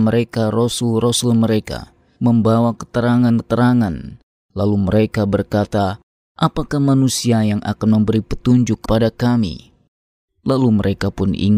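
Speech, with compressed frames skipped at 3.38 s and 8.84 s. Whole blocks of coded audio never reach the output, so the speech lurches forward: about three frames (around 70 ms) at the first point and two (around 50 ms) at the second, with 26.1 ms frames. A spectrogram shows harmonics jumping abruptly. The waveform shows a splice-like discontinuity.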